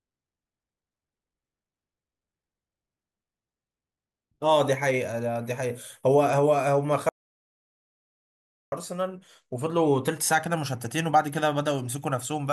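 At 7.09 s the speech cuts out to dead silence, no room tone, until 8.72 s: an audio dropout to silence, likely a lost input link.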